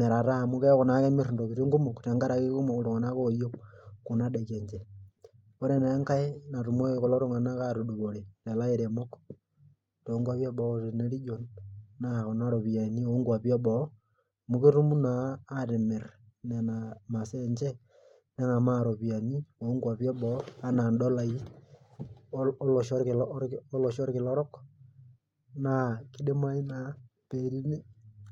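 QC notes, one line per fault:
No faults found.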